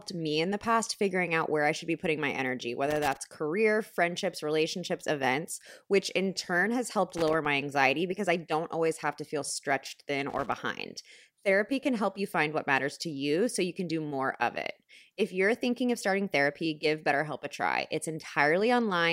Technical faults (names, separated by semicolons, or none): loose connector crackle